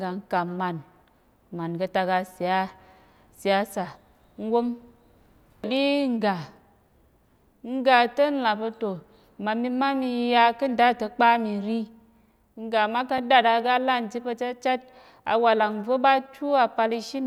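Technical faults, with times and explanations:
13.18 s, block of digital silence: a 4 ms run of zeros just before "dàt aga lan chit", with hard edges that give a tick, unlike a faded dropout.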